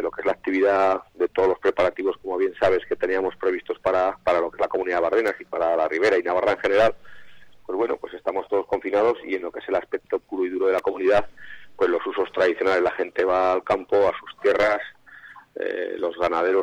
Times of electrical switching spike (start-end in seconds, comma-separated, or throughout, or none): 5.28, 10.78